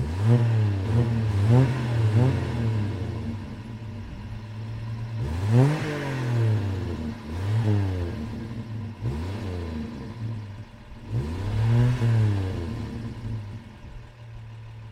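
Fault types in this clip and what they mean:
Doubled audio track: From 0.86 s to 5.64 s a second, full-band copy of the same sound trails the original by roughly 0.7 s at around 5 dB quieter, giving a distinct repeat rather than reverb. The copy has no decay or room colour, and it switches on and off abruptly at those points. The likely cause is the signal being captured twice, once through a slower path, or an edit leaving two misaligned copies stacked together.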